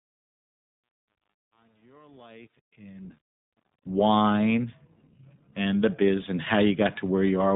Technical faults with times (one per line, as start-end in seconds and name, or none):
0.00-7.56 iLBC codec
0.00-3.96 truncation distortion on a fade